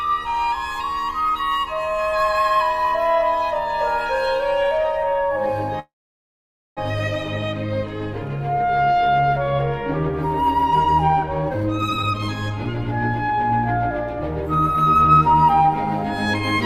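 A call audio freeze from 5.79 to 6.79 s likely comes from delayed packets emptying the jitter buffer. The last sound fades into about 0.88 s of silence, then resumes intact.

Jitter buffer speed-up follows at 11.45–12.51 s (168%, roughly 0.7 s removed), 13.13–13.52 s (111%) and 14.52–15.68 s (112%). Pitch-period trimming makes the audio rush at unchanged pitch.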